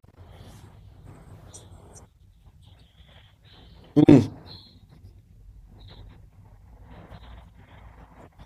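No technical faults can be heard in the speech recording: the signal carries no dropouts, clipping, glitches or other audible damage at any point.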